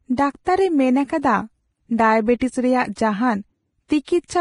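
Throughout the speech the treble is hissy and grainy and stops dead at 10.6 kHz, with tones roughened and consonant onsets blurred. This heavy damage is likely from Vorbis compression at a low setting, consistent with a bitrate somewhere near 28 kbps. At that setting the codec lowers its cut-off and quantises the upper residue so coarsely that fine detail is replaced by noise of similar energy, which accounts for the gritty texture.

Pre-echo appears from 0.45 to 0.47 s, then at 2.95 s and 3.88 s, each spreading about 18 to 20 ms ahead of a sharp onset. In each case a strong attack falls late in a transform block, and the quantisation noise sized for that loud moment is spread across the whole block, including the quiet stretch before it. The result is a brief hiss just before each attack, and the attack itself sounds softened and smeared.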